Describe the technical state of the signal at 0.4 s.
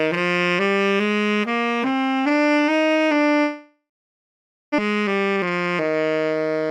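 At 0.4 s the signal is intact, with no audible technical fault at that moment.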